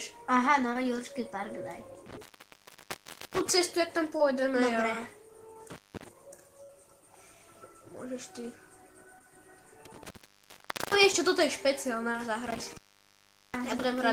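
Short concealed packet loss at 0.73 to 0.77 s: about 20 ms of audio failed to arrive, and the receiver bridged the gap by extending the preceding sound for roughly 17 ms before blending back. It comes through as a brief smear or wobble.

Intermittent contact from 2.06 to 3.50 s: a loose connection opens for 1.13 s. The sound drops out with crackle at each edge, and only faint hiss, sometimes with mains buzz, remains while the contact is open.

Short concealed packet loss recurs at 4.17 to 4.21 s and 5.53 to 5.57 s, each a 20 ms hole patched with continued sound and heard as a small wobble.

Intermittent contact from 5.70 to 6.08 s: a 0.27 s open-circuit dropout with crackly edges.

Burst of packet loss at 6.63 to 6.71 s: 60 ms of audio is missing. Concealment holds the last sound for about 55 ms and fades it, so it becomes a sustained buzz or a dying hiss. Playback then resumes further along, and the part in between is lost.

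Short concealed packet loss at 9.19 to 9.22 s, with only about 12 ms filled, gives another quick wobble.

Intermittent contact from 9.85 to 11.16 s: the line is open for 0.82 s, with crackle, then silence carrying residual hiss.

Short concealed packet loss at 12.12 to 12.16 s smears the sound briefly.

Intermittent contact from 12.47 to 13.84 s: a final dropout of 0.77 s with the same crackling edges and underlying hiss.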